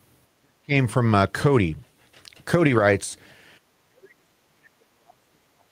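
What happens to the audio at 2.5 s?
Nothing goes wrong at 2.5 s: the audio runs straight through that moment with no dropout, click, distortion or other audible fault.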